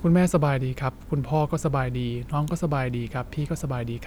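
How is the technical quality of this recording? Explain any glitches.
No glitches or technical faults are audible in this recording.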